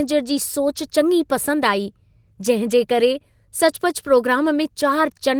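Speech, and no technical faults can be heard.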